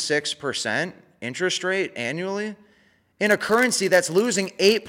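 Block size mismatch (padded) from 3.25 s to the end of this speech clip: each short block is zero-filled to the next stage's size, causing a 91.5 Hz buzz and a barely perceptible 0.996× slowdown.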